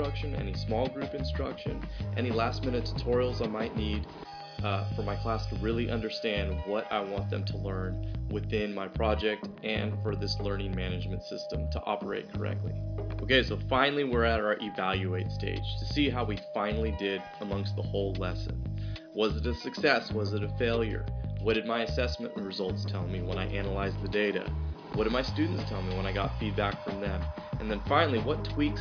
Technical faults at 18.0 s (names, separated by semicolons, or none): none